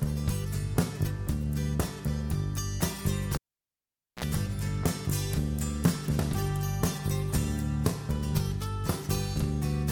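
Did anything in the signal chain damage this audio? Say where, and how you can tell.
Yes. The damage sits in the analogue wiring: a cable pulled and plugged in while live. At 3.35 s a pop marks the contact breaking. The signal then drops to near silence for about 0.85 s. Just before it returns there is a short burst of 60 Hz mains buzz, roughly 50 ms long. That is the plug tip touching before the sleeve grounds it. A second pop at 4.24 s marks the connection seating again.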